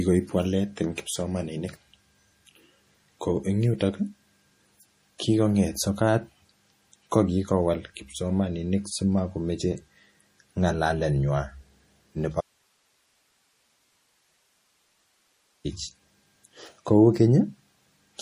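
From start to finish the speech carries plainly audible artefacts of what is likely MP3 compression, at a bit rate that sounds like roughly 40 kbps. With bits this short, the encoder drops weaker frequency lines, which flicker on and off between frames, giving the speech a watery, swirly texture and smeared onsets. On a spectrogram the treble stops at a flat ceiling near 15.2 kHz, and the upper bands look speckled and patchy.

From 12.41 to 15.65 s the speech cuts out abruptly for 3.24 s and only hiss remains, around 45 dB below the normal signal, before it returns just as suddenly. This is likely an audio dropout to a faint residue: the wanted signal was lost while the path after it stayed live. The waveform collapses to a thin band of noise with sharp edges at both ends, and the spectrogram shows the same sharp edges around a uniform low-level noise floor.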